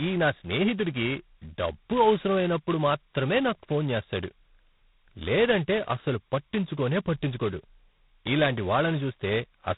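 G.726 ADPCM throughout codes prediction error too coarsely, fitting 16 kbit/s: a rasping hiss tracks the speech level. The spectrogram shows grainy noise and nothing above 3.9 kHz.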